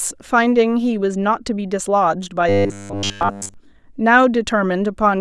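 From 2.49 to 3.54 s, the speech turns into robotic sound from repeated short buffers. The voice becomes a rigid, metallic buzz at 100 Hz. That pitch points to a 10 ms chunk being replayed. The likely cause is new audio arriving too seldom, so the software repeats the last chunk instead. Essentially the whole stretch is made of these repeats. Only the rough outline of the speech survives.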